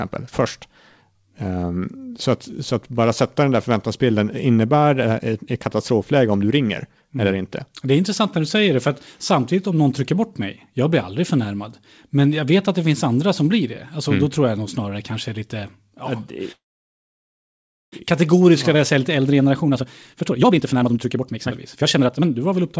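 From 16.52 to 17.94 s, packets were likely held up and the jitter buffer ran dry, a call audio freeze: a brief fading tail, then about 1.33 s of silence before the sound resumes unbroken. From 18.74 s to the end, the overfilled buffer trims pitch periods repeatedly, a jitter buffer speed-up, so the audio runs 132% fast at unchanged pitch, losing around one and a half seconds.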